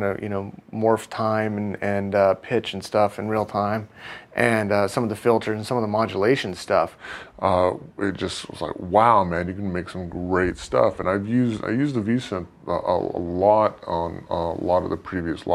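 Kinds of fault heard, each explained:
Section at the wrong speed: from 6.98 s to the end, the audio plays at 0.86 times its proper speed, so pitch drops about three semitones and pacing slows together, likely from a clock mismatch. Unlike pitch shifting alone, timing stretches along with the lowered pitch.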